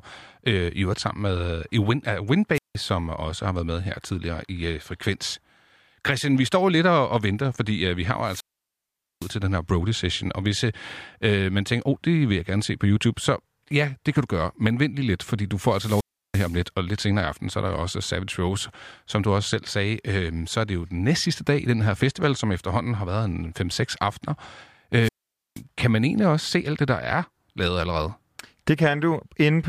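Four wireless microphone squelch dropouts break up the speech, at 2.54 to 2.76 s (muted for 0.17 s), 8.24 to 9.37 s (0.81 s), 15.66 to 16.63 s (0.34 s) and 25.0 to 25.62 s (0.48 s). Each time the radio link fades, hiss swells, and the receiver's squelch shuts the output into near silence. That rising static before each hole separates it from a digital packet dropout, which cuts cleanly without warning.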